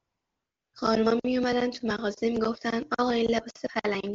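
From 0 to 0.73 s, AMR comfort noise fills the opening. For these 734 ms the phone treated the line as silent and sent no speech frames. The receiver made up a stand-in background from a rough sketch of level and spectrum. The result is a steady, smooth hiss in place of the real room sound. It switches off when speech frames resume. The wideband HD Voice path carrying the speech shows little or no coding damage.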